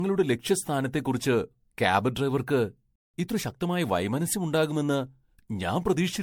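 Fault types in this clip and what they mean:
Generation loss: The speech has a swirly, hollow, smeared quality, with softened consonant attacks and more noise than a single lossy pass would leave. The likely cause is repeated lossy coding, with the sound pointing to an MP3 chain at around 96 kbit/s run through about ten times. Each decode and re-encode quantises on a shifted frame grid, so the errors and spectral holes accumulate.
Playback stall: The speech stops in mid-flow at 2.96 s and stays silent for about 182 ms, until 3.14 s, before picking up again. This is likely a playback stall, where the player's buffer ran dry or its output thread was blocked and nothing was sent to the output until data became available again. The gap is long enough to be heard clearly as an interruption.
Time-compressed catch-up: From 3.14 to 3.86 s, right after the gap, the speech runs at 1.25 times its normal rate while keeping its pitch. 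To absorb the backlog left by the stall, the player removes short slices of audio and cross-fades across the joins. This shortens that stretch and makes it sound hurried. Normal pacing returns once the delay has been made up.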